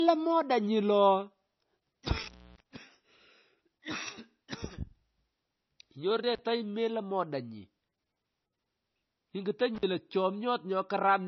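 Low-bitrate audio saved at a high bitrate runs through the whole speech clip. Nothing is present above 5.9 kHz, and the dull, smeared MP3 character points to a very low-bitrate first encode. That is likely later re-saved at a high bitrate, which cannot restore what was discarded.

Intermittent contact breaks the signal at 2.23 to 2.60 s, with the line open for about 294 ms, then briefly at 6.33 to 6.41 s (35 ms) and 9.75 to 9.83 s (49 ms). A loose connection opens momentarily, so the sound drops out with crackle at each edge and faint hiss in the gap.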